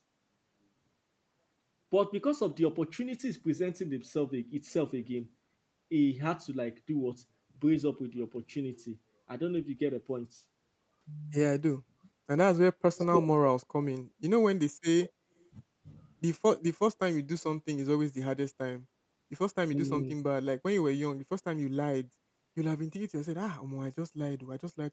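From 11.91 to 12.03 s the background is gated by the echo canceller: the room sound drops by about 20 dB for roughly a tenth of a second and then returns. The dip affects the ambience rather than the talker, and it does not repeat, which sets it apart from a network dropout.

At 12.96 to 13.06 s and 15.38 to 15.45 s there is an echo leak, likely from a loudspeaker whose echo canceller let some of the far-end sound back through. A copy trails the sound by 160 ms, well below the speech level the first time and barely audible the second. Because it is a delayed repeat and not a gap, it differs from the suppression dips.

Speech suppressed in double talk follows at 13.11 to 13.27 s, 14.99 to 15.21 s and 19.68 to 20.24 s. The talker's level dips by roughly 15 dB, then by about 35 dB, then by about 25 dB, over stretches of a fraction of a second, likely because the canceller mistook overlapping talk for echo. 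Here the voice itself is pushed down, whereas the gating event removed only the background.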